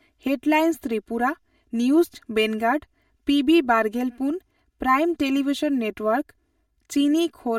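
Throughout the speech, the sound is hollow and phasey, with fixed notches starting around 150 Hz and recurring at even spacing up the spectrum. This is channel delay (comb filtering): one channel runs roughly 3 ms late, and summing to mono cancels the shared content at those frequencies.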